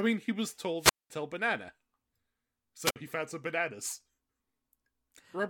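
At 0.78 to 1.10 s, a wireless microphone squelch dropout occurs. The radio signal fades, hiss rises, and the receiver mutes the speech for 208 ms. A second, shorter dropout at 2.82 to 2.96 s mutes it for 55 ms.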